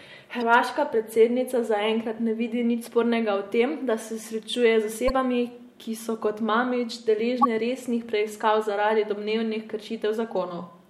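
Four short faults interrupt the speech, at 0.38 to 0.43 s, 2.84 to 2.88 s, 5.06 to 5.10 s and 7.41 to 7.45 s. Each lasts about 44 ms. They point to damaged data in a compressed stream. Bytes in those stretches were lost or corrupted. The decoder misread the affected frames and lost sync. It then hunted for the next valid frame header. Each event sounds like a brief chirp, squawk, click or short hole in the speech.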